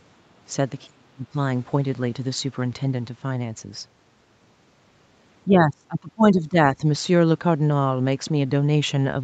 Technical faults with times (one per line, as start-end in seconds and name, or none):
0.86-1.34 speech suppressed in double talk
5.45-6.82 speech suppressed in double talk